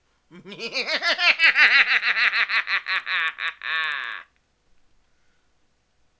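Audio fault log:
Throughout: resampler restarted on every block. Each 40 ms block was converted separately, consistent with a 48 kHz to 16 kHz rate change, so every block edge lacks its true neighbouring samples and carries a small error, heard as regular ticks at 25 Hz wherever the sound is present.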